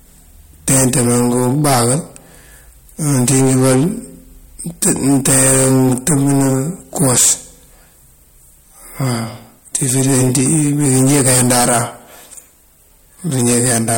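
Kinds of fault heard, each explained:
Hard clipping: speech driven about 23 dB past what the stage can pass, roughly a tenth of samples flattened, so every loud syllable turns to harsh fuzz.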